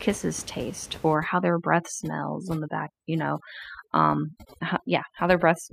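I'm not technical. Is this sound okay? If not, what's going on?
No. From 1.15 s onward the background drops and breaks into twinkling specks. This is overdone noise removal: cleanup set too strong, erasing quiet voice along with room noise.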